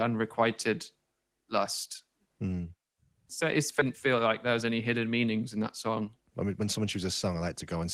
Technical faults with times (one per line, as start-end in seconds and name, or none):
3.79-3.81 skip ahead
3.89-4.72 jitter buffer speed-up
5.62-7.83 jitter buffer speed-up